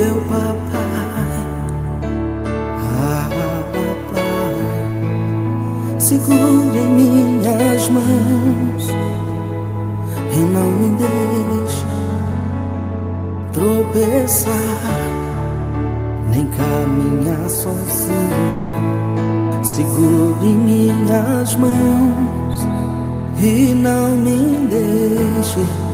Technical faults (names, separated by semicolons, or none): long network dropout; burst of packet loss; short concealed packet loss